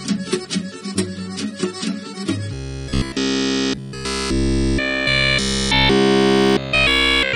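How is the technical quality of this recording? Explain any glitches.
Quality breaks down badly from 2.54 s to the end. Robotic sound from repeated short buffers covers 2.54–7.35 s: essentially everything becomes a rigid, metallic 66.7 Hz buzz, likely from a 15 ms chunk looped while late audio is skipped. Unlike steady hum, it still roughly follows the sound's contour.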